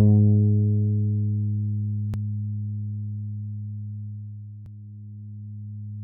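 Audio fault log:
2.14–2.16 s and 4.66–4.69 s: overlapping chunks. At each join, about 23 ms of audio plays twice because each 2.5 s chunk starts before the previous one ends. The repeated piece is heard as a brief stutter or click.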